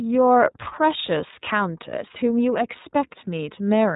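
From start to finish the speech sounds muffled, with nothing above 3.8 kHz, and it is clearly rough and synthetic. This is iLBC codec damage: each 30 ms frame's excitation is coded on its own at a low rate, which fits iLBC's 13.33 kbps mode.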